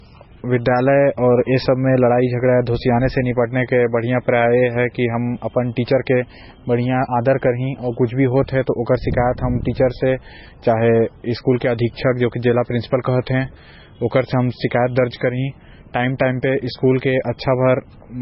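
Low-bitrate audio saved at a high bitrate, throughout: the speech has nothing above 5.6 kHz, which points to a very low-bitrate MP3 likely re-saved at a much higher rate.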